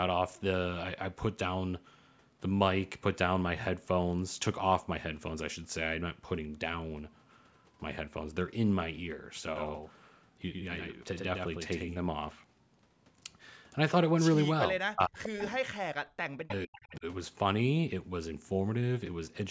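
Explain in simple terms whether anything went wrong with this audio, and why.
From 9.56 to 12.06 s the speech has a doubled audio track. A second copy of the same speech plays about a tenth of a second behind the first. It is a little quieter and has no echoey tail. The likely cause is the sound being captured twice, or two copies sitting out of step.

From 14.68 to 15.42 s and again from 15.75 to 17.05 s, the speech is suppressed in double talk. The voice drops sharply, almost to silence, in patches. Likely both sides spoke at once, and the echo canceller turned everything down.

Short bits of echo leak come through at 15.39 to 15.46 s, 16.48 to 16.54 s and 16.85 to 16.96 s. Each is a faint copy of speech arriving about half a second late. Likely a loudspeaker on the other end fed sound back that its echo canceller missed.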